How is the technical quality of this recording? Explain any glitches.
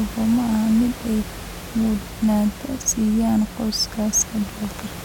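No glitches turn up anywhere in the recording, and the only thing to note is some room noise sitting about 14 dB below the speech, which belongs to the space the microphone was in rather than to any problem with the system.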